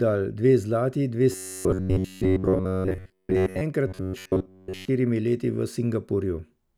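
Right after "dve zlati dve", from 1.32 to 3.61 s, and again from 3.87 to 4.88 s ending just before "leti v", the speech collapses into robotic sound from repeated short buffers: a rigid, metallic buzz near 93.8 Hz that roughly tracks the syllables. Most of each stretch is replayed material, likely from audio arriving too seldom and a roughly 10.7 ms chunk being looped. A spectrogram shows evenly spaced harmonic lines locked at 93.8 Hz; the waveform shows identical repeating cycles.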